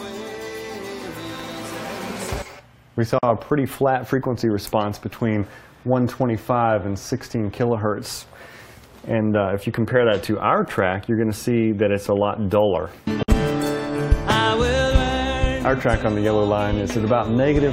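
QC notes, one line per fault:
3.19–3.23 s and 13.23–13.28 s, gap at a join of encoded pieces: the continuous sound opens into silence of 44.5 ms, then 54.2 ms, ten seconds apart. Pieces encoded separately were joined untrimmed, leaving each run's start-up delay and last-frame padding in place. Unlike a dropout, nothing is skipped and the sound picks up exactly where it stopped. The abrupt edges are smeared rather than clicking, and the regular 10 s spacing marks segment boundaries.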